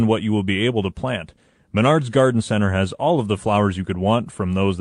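A speech recording, with nothing technically wrong with it.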